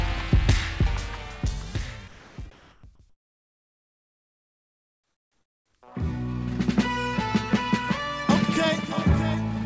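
From 2.08 to 2.38 s, about 0.3 s of sound drops out into steady noise. The voice detector likely mistook it for background, so the sound was dropped.

Comfort noise in place of the background follows, from 2.51 to 2.83 s and again from 3.10 to 5.74 s. The real background becomes flat, featureless hiss, about 3 dB louder the first time and about 8 dB quieter the second.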